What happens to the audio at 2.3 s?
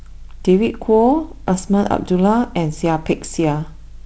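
At 2.3 s the speech runs through intact, with nothing beyond the light, steady coloration of the G.722 wideband telephone coding that carries the whole recording.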